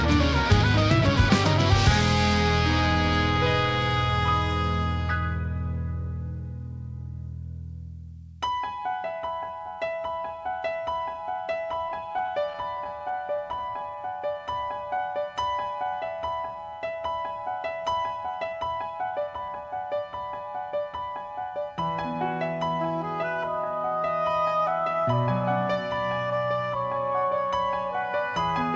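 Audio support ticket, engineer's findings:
Repeated stalls (stutter), 11.72 to 13.77 s. Packets arriving late or slower than playout kept draining the jitter buffer, and the receiver extended the last sound across each gap. Symptom: sixteen short hitches, longest 12 ms, 163 ms filled in total, about 8% of the span. Nothing dropped, but the audio drags and catches repeatedly before recovering.

Jitter buffer slow-down, 13.62 to 15.92 s, overlapping the tail of the stalls. Buffer ran low or had just raised its target delay, so the receiver rebuilt its reserve by repeating single pitch periods and pause fragments many times over. Adds 214 ms and plays at 91% speed. Symptom: sound stretched and drawn out at unchanged pitch.

Jitter buffer speed-up, 17.86 to 19.65 s. Buffer overfilled, consistent with delayed packets landing together, and the receiver trimmed short pitch-period pieces in rapid succession to bring latency back down. 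Plays at 111% speed, roughly 0.2 s removed. Symptom: a hurried, compressed stretch at the same pitch. The wideband call path shows nothing above 8 kHz, which fits G.722.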